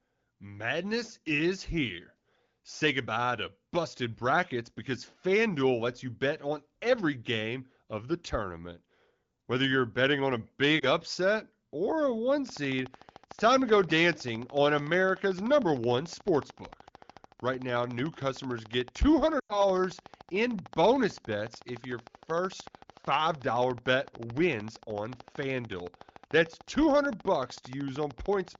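Speech carried over the AMR wideband (HD Voice) codec, whose light coding texture fits one of its higher bitrates, has two episodes of lost AMR speech frames. At 10.79 s, between "you're betting on a" and "upset or a one", a single 20 ms frame drops. The decoder fills the gap by repeating the previous pitch and vocal-tract settings at reduced gain, so there is a brief dip or warble. On a spectrogram it appears as a short stretch of smeared, copied harmonics. At 19.39 s a longer run begins, about 100 ms of lost audio, which fits five frames. The concealment drops the sound to near silence within two frames, and the voice returns weakly by about 19.65 s. The waveform shows a decaying envelope followed by a low-level gap. From 12.49 s, just after "upset or a one", to 28.56 s there is a train of clicks: a regular tick at 13.5 per second, around 200 in all, with some peaking a few dB above the speech and audible through the pauses. 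The spacing and matching shapes point to a likely cause of periodic electrical interference or a struggling interface. On a spectrogram the clicks appear as evenly spaced thin vertical lines, and on the waveform as a comb of sharp spikes.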